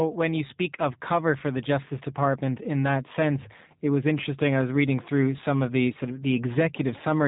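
Throughout, the speech carries G.729 codec damage: band-limited at 3.8 kHz, plainly rough and synthetic, as pulse-coded excitation rebuilds it, which fits 8 kbit/s G.729A.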